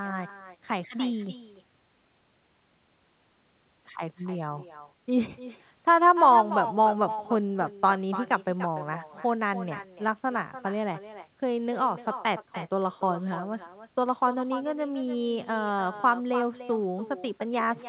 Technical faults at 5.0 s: echo with no canceller

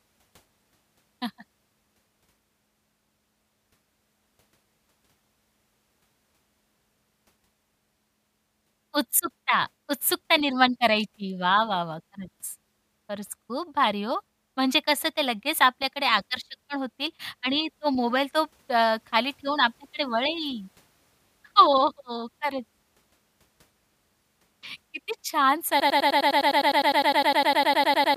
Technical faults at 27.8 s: broken-record loop

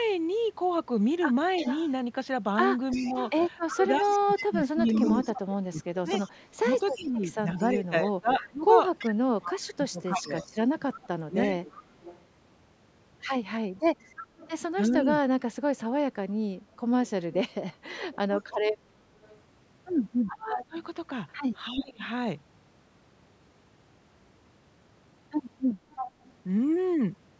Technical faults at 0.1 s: none

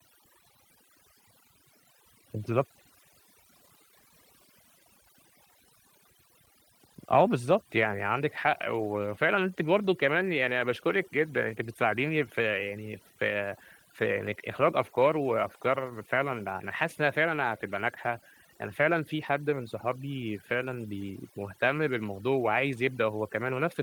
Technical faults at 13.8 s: overdone noise removal

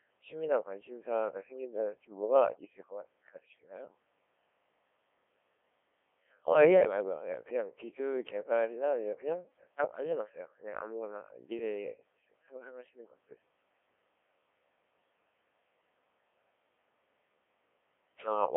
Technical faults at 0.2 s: Codec 2 vocoder

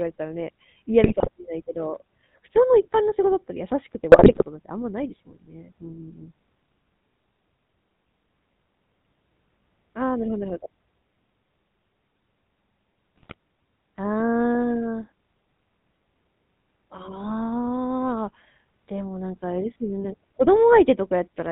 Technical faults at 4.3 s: GSM full-rate codec; GSM bit errors

